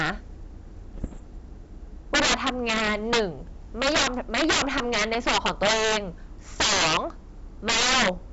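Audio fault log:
0.00–0.10, 2.14–3.20, 3.82–5.97, 6.60–6.97 and 7.68–8.09 s: integer overflow. Loud peaks break into harsh, violent cracks, far sharper than clipping. Levels driven about 5 dB past the limit in the first burst and about 13–14 dB in the rest wrap to the opposite sign instead of being held at full scale.
0.94–1.21 s: bit errors on an ADPCM link. A cluster of pops and rough, gritty bursts with brief jumps in level. Flipped bits, around one percent, knock the decoder's step size and predictor off track, so each error keeps ringing for several milliseconds.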